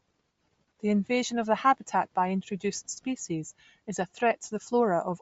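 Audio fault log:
Throughout: Bluetooth LC3 compression. The speech carries a plainly audible breathy, grainy edge and nothing above 7.7 kHz, likely from LC3 coding at a low rate, consistent with roughly 32 kbps, where sparse upper-band detail is zeroed and replaced with noise fill.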